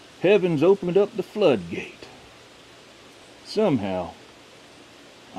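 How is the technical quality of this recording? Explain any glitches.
Two short glitches are frames out of order, at 0.84 to 0.92 s and 3.19 to 3.24 s. Adjacent blocks of about 40 ms and then 20 ms were swapped, so each stretch plays back-to-front in halves, giving a brief garbled flutter.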